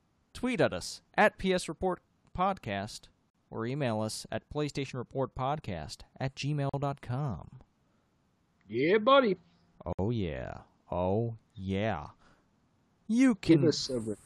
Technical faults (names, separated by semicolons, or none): gap at a join of encoded pieces